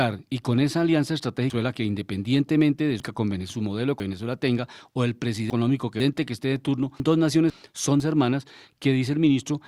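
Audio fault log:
1.5–3.5 s (after "y con esa alianza"), 4.0–6.0 s (after "su modelo") and 7.0–8.0 s (after "que esté de turno"): chunks out of order. A 500 ms block plays three places late in the first two spans and one place late in the third, so nothing is lost but the sound jumbles. Each span has three hard joins, seen as sudden waveform steps and thin vertical lines on a spectrogram.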